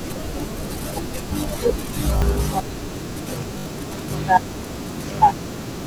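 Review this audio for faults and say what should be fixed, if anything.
Repeated buffer at 2.18 to 2.22 s and 3.58 to 3.66 s: fresh audio arrived late, so the playback device replayed its last block, which fits a 20 ms buffer. The same fragment sounds three times, then five, with a hard join at each repeat, heard as a brief buzzy stutter. About 40 ms and then about 70 ms of speech are lost. To prevent it, enlarge the playback buffer or give the audio thread higher priority so each block is delivered before the device needs it.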